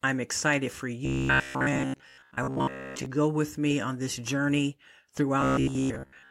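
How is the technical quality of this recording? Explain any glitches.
The recording has a clear fault. From 1.05 to 3.06 s, and again from 5.41 s to the end at 6.31 s, the speech turns into robotic sound from repeated short buffers. The voice takes on a rigid, metallic buzz at about 66.7 Hz. Only the rough shape of the speech survives. The likely cause is audio arriving too slowly. The software then loops a 15 ms slice, and most of the real audio is skipped.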